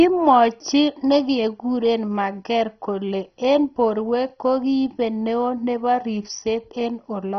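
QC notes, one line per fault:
Throughout: MP2 compression, likely from a low bitrate around 32 kbps. It starved the upper sub-bands, leaving dull speech with nothing above 6.1 kHz and heavy gurgling, granular distortion.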